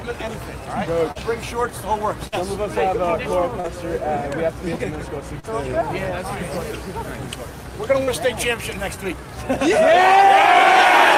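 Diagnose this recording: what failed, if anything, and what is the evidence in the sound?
Brief smears or wobbles appear at 1.11 to 1.18 s, 3.60 to 3.67 s, 5.40 to 5.46 s and 8.03 to 8.10 s. This is short concealed packet loss at the network stage. Each time, about 40 ms of audio never arrived, and the receiver extended the preceding sound for roughly 35 to 39 ms before blending back.

At 2.27 to 2.35 s the sound is held and turned down across the gap, as a buzz or a fading hiss, before resuming further on. This is a burst of packet loss, also network-side. The receiver filled 47 ms while 40 ms of audio went missing, so the part in between is gone.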